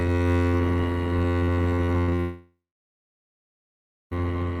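A music clip that turns choppy and robotic from 1.75 to 2.20 s, with the sound breaking into a rapid series of holes that are smeared over by a robotic continuation. This is repeated packet loss (robotic sound): five gaps arrive in quick succession, the longest about 60 ms, and each is filled by extending the last bit of audio, so roughly a third of that stretch is patched sound rather than the music itself. At 2.20 s the playback falls away entirely until 4.13 s. A brief fading buzz gives way to about 1.5 s of silence, and the music then resumes further along with the missing passage simply gone. This is likely a long network dropout, with nearly two seconds of audio never reaching the receiver and the concealment unable to bridge a gap that long.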